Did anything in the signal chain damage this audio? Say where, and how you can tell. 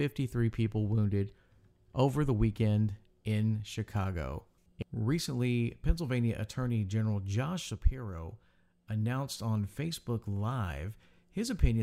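No, nothing in this speech recording stood out as damage on listening.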